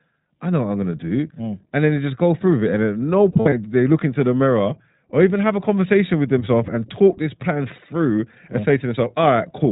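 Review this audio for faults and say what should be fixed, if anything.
The iLBC codec shapes the whole clip. Nothing above 4 kHz survives, and the speech has a rough, synthetic edge, consistent with iLBC's 20 ms mode at about 15 kbps. Unlike generic lowpass filtering, the graininess comes from frame-by-frame excitation coding. Prevent it by using a wideband codec such as Opus.

Lost iLBC frames fall between 3.32 and 3.53 s, after "it and at no" and before "do they look into". About 120 ms goes missing in short gaps of up to about 70 ms. The decoder fills each gap with a repeated, buzzy pitch cycle, not silence or a stutter, and clean speech returns immediately because each frame decodes on its own. Prevent it with forward error correction or a larger jitter buffer on the network path.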